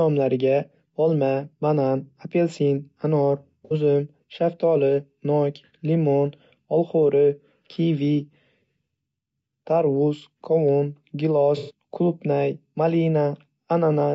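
From the start, the speech sounds rough and grainy, with noise between the harmonics and a thin, synthetic top band. This is low-delay AAC compression, likely AAC-ELD at around 32 kbps. Its short frames blur pitch detail, so the damage is graininess rather than the plain muffling of a band limit.

Between "banan apelsin anor" and "uzum shaftoli nok limon", at 3.65 to 3.74 s, AAC frame loss with concealment leaves a smeared, phasey patch. The decoder fills the missing audio from the last good spectrum. A longer patch follows at 11.57 to 11.71 s. Unlike a dropout, neither has a hard silence.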